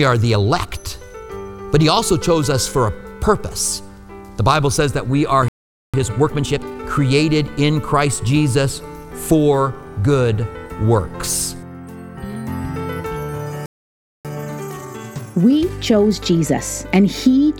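At 5.48 s the sound cuts out mid-flow and stays silent until 5.94 s, about 0.45 s, then resumes. This is a playback stall, likely the player running short of data or having its output thread blocked. From 5.94 to 6.84 s the audio is hurried at 1.5 times normal speed with unchanged pitch. This time-compressed catch-up comes from the player trimming its backlog by removing short slices and cross-fading across the joins. A second stall silences the sound from 13.66 to 14.25 s, about 0.59 s, likely from the same starved or blocked playback path. Catch-up follows from 14.25 to 16.59 s, this time gentler at 1.25 times speed, again pitch-steady as the backlog is worked off.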